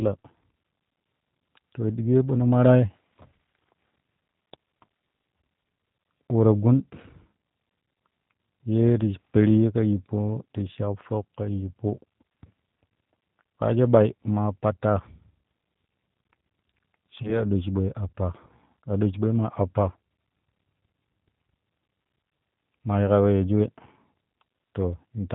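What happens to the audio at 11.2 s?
At 11.2 s the speech carries the sound of the G.729 codec, as it does across the whole clip. It is plainly audible. Nothing above 4 kHz survives, so the speech is dull and boxy. The voice is rebuilt from a vocal tract filter, a pitch predictor and a few pulses per frame. That gives it a rough, synthetic edge. The damage fits an 8 kbit/s stream.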